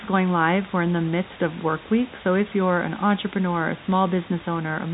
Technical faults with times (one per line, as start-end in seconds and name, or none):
none